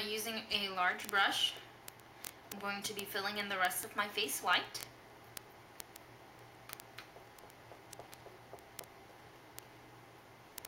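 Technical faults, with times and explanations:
0.12–10.67 s, word clock ticks: a steady train of clicks, roughly fifty per second, runs the whole length. The receiving device is not locked to the sender's clock. The mismatch, around a tenth of a percent, slips one sample every 20 ms or so, leaving a tick at each slip.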